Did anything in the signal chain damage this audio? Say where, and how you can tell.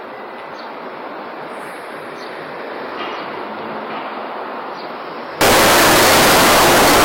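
Yes. From 5.41 s onward, sample-format conversion likely read 32-bit float samples as 32-bit integers, a float read as integer fault. The sign and exponent bits then set each value, squaring the waveform at an almost fixed, high level, so the audio becomes very loud and harsh.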